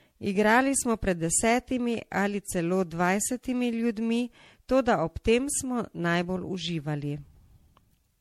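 Throughout the speech, the sound is swirly, hollow and smeared, with blurred attacks and nothing above 16.5 kHz. This is likely generation loss from around seven MP3 passes at about 64 kbit/s, since the degradation is heavier than a single encode at that rate would leave.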